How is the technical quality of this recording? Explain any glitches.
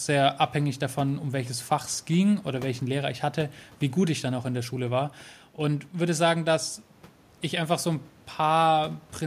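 Nothing stood out as a glitch on listening; only a faint room noise sits about 30 dB below the speech.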